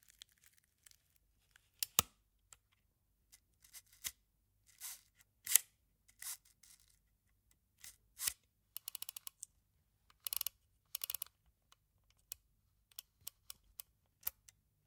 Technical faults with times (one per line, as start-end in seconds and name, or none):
none